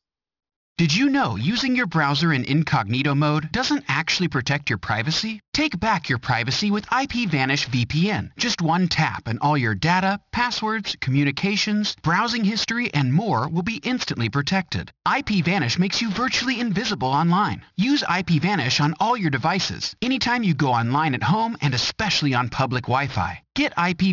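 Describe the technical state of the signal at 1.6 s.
At 1.6 s, as throughout, there is aliasing: content above 6 kHz folds back as gritty, unrelated tones roughly 15 dB down. That fits a drop to a 12 kHz rate without filtering, and the grit is what separates it from plain dull band-limiting.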